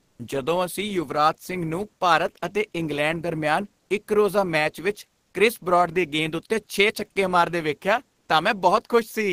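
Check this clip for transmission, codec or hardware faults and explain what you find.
Two transmission faults sit at the very start of the clip, both tied to the sender's voice activity detection.

From 0.0 to 0.19 s there is comfort noise in place of the background: a steady, featureless hiss, about 15 dB quieter than the real room sound and roughly 49 dB below the loudest speech. This is likely discontinuous transmission, which points to Opus DTX. The sender stopped sending during silence, and the receiver synthesised a rough noise to fill the gap.

From 0.16 to 0.19 s the first speech onset is clipped by the voice detector, so the opening 30 ms of sound are missing and the speech starts abruptly. The likely cause is the same DTX detector reacting late, so the receiver played comfort noise where the soft beginning should be.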